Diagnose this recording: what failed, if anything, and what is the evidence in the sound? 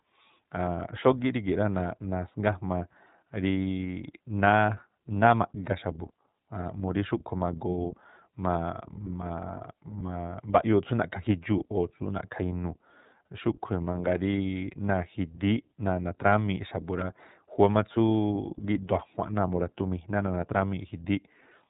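iLBC codec damage runs through the whole speech recording, and it sits at the codec stage. The band stops at 4 kHz, so sibilants sound dull and there is no air above it. The speech carries a plainly audible rough, synthetic edge. The character fits iLBC at about 13.33 kbps with 30 ms frames. Each frame's excitation is coded on its own, without reference to the frame before.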